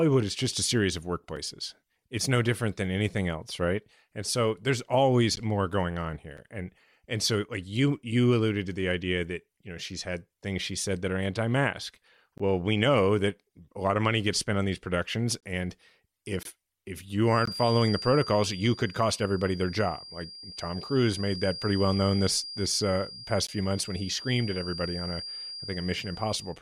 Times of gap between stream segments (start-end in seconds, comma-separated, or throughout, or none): 1.36, 5.36, 6.37, 12.38, 15.40-15.43, 16.43-16.45, 17.45, 23.47